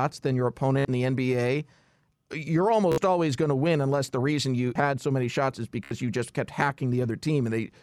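Bluetooth stutter at 0.79–0.85 s, 2.92–2.98 s and 5.84–5.91 s: late or lost packets made the receiver repeat its last short slice, buzzing for about 58–73 ms before speech jumps ahead.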